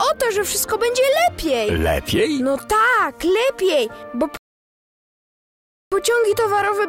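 At 4.37 s the sound just drops to silence until 5.92 s, a rebuffering stall: the player ran dry of downloaded audio and waited for more. When it picks back up, it's exactly where it left off, so nothing's missing, just about 1.55 s of dead air added.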